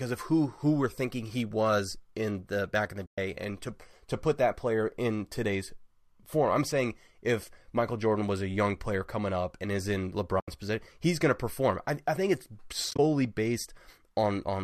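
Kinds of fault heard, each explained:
AAC frame loss with muting: runs of coded frames never reached the decoder, which filled their spectrum with zeros, so the overlapping windows fade the speech out and back in. The holes are at 3.06 s, lasting 120 ms; at 10.40 s, lasting 80 ms; and at 12.91 s, where 60 ms goes missing in short bursts across 80 ms, none much over 30 ms. Their lengths suggest 10 ms frames, likely from low-delay AAC.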